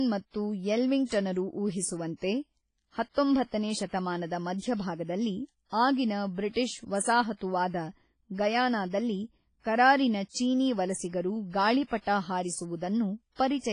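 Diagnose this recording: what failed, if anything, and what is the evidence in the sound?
WMA compression, present throughout the speech, is likely the cause of the damage here, at the codec stage. Nothing survives above 10.1 kHz, and the degradation is heavy: smeared, ringing transients, a washy texture, and a hiss that swells and fades with the speech. That fits a low bitrate around 24 kbps, where long transform blocks spread quantisation noise over tens of milliseconds and weak spectral lines are discarded outright.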